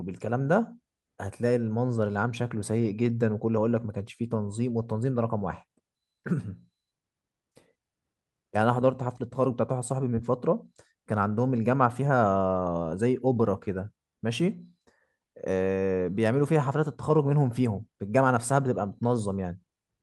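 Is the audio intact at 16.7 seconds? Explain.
Yes, at 16.7 seconds the speech is intact, with no dropout, click, distortion or other fault at that moment.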